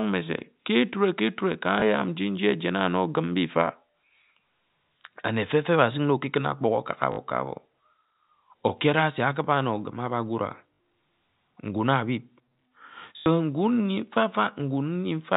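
Packet loss with last packet repeated occurs at 1.80–1.82 s, 7.12–7.18 s, 10.74–10.80 s and 13.18–13.26 s. The gaps last 20, 60, 60 and 80 ms, which fits 20 ms packets. The receiver replayed the final packet it had, and those copies seldom line up with the pitch. The longer gaps become a brief robotic stutter buzzing at about 50 Hz, heard through the 4 kHz-limited telephone band.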